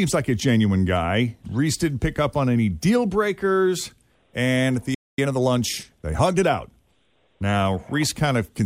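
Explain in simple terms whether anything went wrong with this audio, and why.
Right after "at the", the speech cuts to silence from 4.94 to 5.18 s, about a quarter second. That's a playback stall, likely the player running short of data. From 5.18 to 6.74 s the speech sounds hurried, about 1.15 times normal speed at the same pitch. That's time-compressed catch-up, where the player trims tiny slices to make up the lost time.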